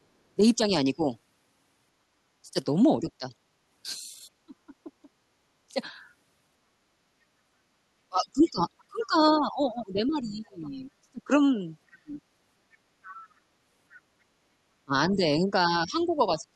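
Speech suppressed in double talk occurs at 0.36–1.0 s, 2.42–3.34 s, 4.46–5.8 s, 8.09–12.21 s and 14.85 s to the end. The talker's level dips in pieces, by roughly 15 to 30 dB, and the longest stretch loses about three seconds in total. This is likely an echo canceller turning its own talker down while the far side speaks. On a waveform the envelope shows notches, and a spectrogram shows speech energy fading.

The other side's voice leaking through appears at 8.79–10.69 s, 12.72–13.23 s and 15.1–16.42 s, faint at roughly 25 dB under the speech. Likely the canceller left loudspeaker pickup in the microphone signal. A spectrogram shows a weak second set of harmonic traces running under or between the main talker's.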